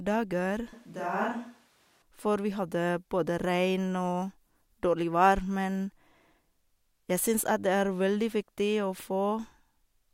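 From 0.73 to 2.02 s, speech drops about 5 dB and turns hollow, with the lows thinned on the spectrogram, likely from a switch to a distant microphone.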